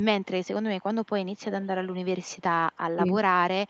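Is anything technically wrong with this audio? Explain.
Yes, there are two kinds of fault. Speech suppressed in double talk occurs at 0.0 to 0.04 s and again at 2.95 to 3.05 s. The echo canceller likely mistook simultaneous talk for loudspeaker echo and attenuated the line. The speech dips sharply, by about 25 dB in the first, 40 ms instance and about 20 dB across the second, 100 ms instance.

An echo leak occurs from 1.52 to 1.68 s. A far-end echo canceller likely failed to remove all of its loudspeaker pickup and sent the remainder back. The result is a faint copy of the speech, delayed by 356 ms and sitting roughly 20 dB below the main voice.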